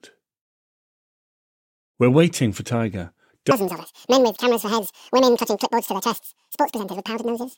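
At 3.51 s the speech lurches into a section at the wrong speed and stays that way to the end. It's running at double speed, so the voice turns chipmunk-high, up by about ten semitones, and hurried. That's likely a playback clock mismatch.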